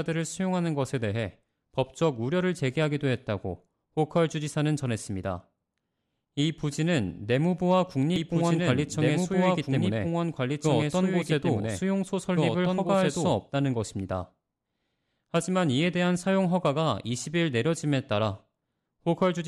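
From 8.16 s to 13.32 s the speech is joined by a doubled audio track: a second copy of the same speech running about a second and a half behind, at roughly the same loudness as the original. The likely cause is a slower second capture path or an edit leaving two copies out of step. Unlike an echo or reverb, the copy is full-band, has no decay or room colouring, and cuts in and out abruptly at both ends.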